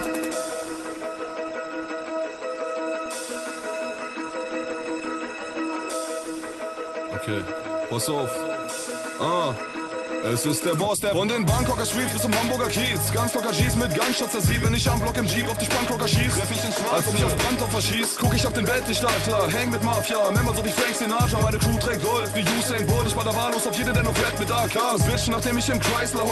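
Nothing stood out on listening, and the top end stops around 12 kHz, as expected for audio carried over this kind of call connection.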